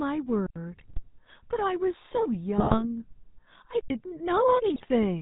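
The whole clip runs through the GSM full-rate codec, and its damage is plainly audible. The coder models the vocal tract and feeds it a sparse train of regularly spaced excitation pulses, so the speech takes on a buzzy, gravelly roughness, and nothing above 4 kHz survives, leaving the sound dull and band-limited. The reduced-rate excitation gives a coarse, grainy texture, consistent with a 13 kbps coder.

At 0.46 s a block of digital silence cuts the speech out for about 93 ms, until 0.56 s. The signal drops out and returns with no fade, leaving a short hole. The length fits a 4096-sample block, likely an output buffer that was not filled in time.

From 0.72 to 1.01 s come GSM bit errors: corrupted bits reaching the decoder scramble the filter, pitch and gain parameters frame by frame, and the speech breaks into squawks, pops and a gargling quality. The same fault returns from 2.58 to 2.85 s.

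At 3.81 s a second block of digital silence, again about 93 ms long and ending at 3.90 s, punches another hole of the same buffer size.

A final burst of GSM bit errors from 4.74 to 4.86 s is shorter, with brief squawks, pops and gargling.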